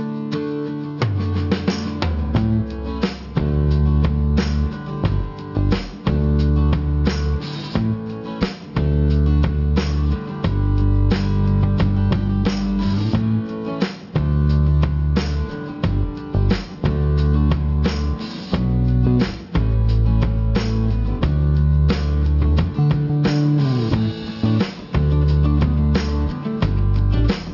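Aliasing runs throughout: content above 6 kHz folds back as harsh, unrelated tones, which fits a drop to 12 kHz without an anti-alias filter, leaving gritty highs about 25 dB below the signal.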